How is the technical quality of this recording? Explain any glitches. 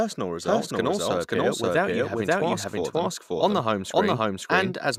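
The recording has one clear fault. A doubled audio track runs through the whole clip. Every part of the speech repeats about half a second later, at roughly the same level. The copy is clean and full-band, with no room decay. A second, slower capture path is the likely cause.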